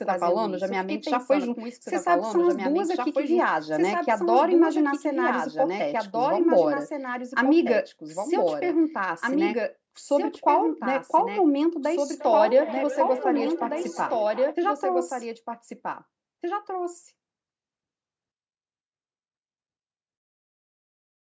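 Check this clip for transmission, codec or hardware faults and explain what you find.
Two faults are present: a doubled audio track runs through the whole speech clip, and a burst of feedback echo between two devices occurs in the second half.

The doubled audio track is audible from start to finish: a second full-band copy of the speech trails the original by about two seconds, sitting roughly 5 dB quieter. It is most likely a second capture through a slower path, or an edit that left two copies out of step. Unlike a room echo, the copy has no decay or reverberant colour, and the delay never changes, so phrases overlap cleanly with their own earlier versions.

The feedback echo between two devices runs from 12.15 to 14.57 s. Speech comes round again at a steady interval of about 0.4 s, each return thinner and more ringing than the last, peaking at about 12 dB below the speech. One device's loudspeaker feeds another microphone in the same room, and neither echo canceller removes sound played by the other device. 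The repeats are short, recurring and progressively coloured, which sets them apart from the single, clean, two-second doubled copy. The call microphone processing's upper limit near 8 kHz is audible throughout as well.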